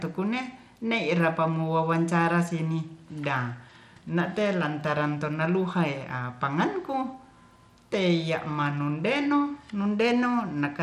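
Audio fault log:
Throughout, Bluetooth SBC compression: the speech carries a gritty, grainy haze and the treble flickers, with nothing above about 16.8 kHz. This likely comes from SBC coding at a bitrate that fits roughly 96 kbps, starving the top sub-bands and coarsely quantising the rest.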